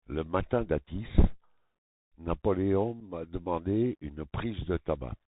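From the start the whole clip runs through a Bluetooth CVSD headset codec, which fits a 64 kbit/s link coding one up-or-down bit per sample. With nothing above 4 kHz, the speech sounds boxed-in, the s sounds come out scratchy, and a granular hiss sits underneath.

At 3.0 s there's unconcealed Bluetooth headset packet loss, most likely a single packet dropped between headset and phone. It leaves a hard-edged hole of about 7.5 ms just before "demande une," and the speech comes back briefly quieter.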